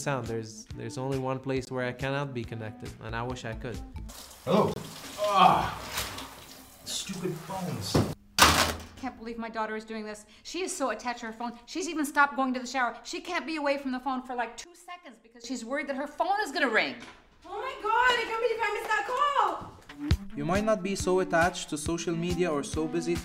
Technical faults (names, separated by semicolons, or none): Bluetooth stall; sudden gain jump